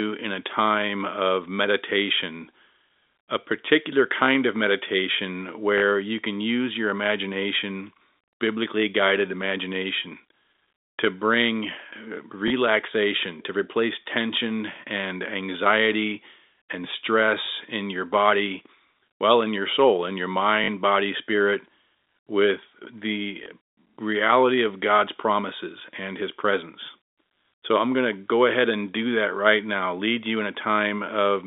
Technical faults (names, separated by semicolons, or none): packet loss with last packet repeated